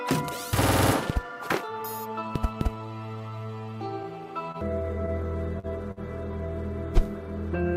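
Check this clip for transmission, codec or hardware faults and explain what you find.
There are three short stalls from a late packet, at 4.52 s, 5.59 s and 5.91 s. Each time a packet came late and the jitter buffer ran empty. The last sound was held for 24, 42 and 52 ms, then carried on with nothing lost, giving a brief drawn-out buzz or dip.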